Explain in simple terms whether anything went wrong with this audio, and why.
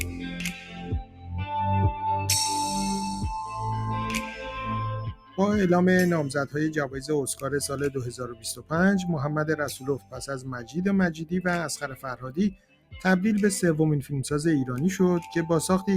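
A noise suppressor built for speech was left on, a case of noise suppressor applied to music or sounds, so steady parts keep getting turned down and the audio pumps and thins.

There is also sound cut by the noise suppressor: it mistook sound for noise and pushed it down hard at 0.0 to 1.46, 4.97 to 5.38, 8.24 to 8.72, 9.78 to 10.23, 10.39 to 10.76, and 11.86 to 12.94 seconds.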